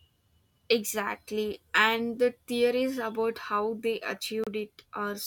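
A speech recording with one brief dropout: at 4.44 to 4.48 s, just after "theories about how they", the sound cuts out completely for about 30 ms and then resumes. This is a Bluetooth stall. Radio interference likely delayed packets until the headphones' buffer emptied, so playback halted until retransmitted data arrived. On a waveform the signal falls to a flat line for that gap; on a spectrogram a narrow blank vertical band cuts across every frequency.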